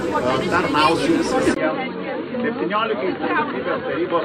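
Input switched to a poorer device at 1.54 s: after a brief gap the sound goes dull and about 5 dB quieter, with nothing above 4.4 kHz, likely from a lower-grade microphone.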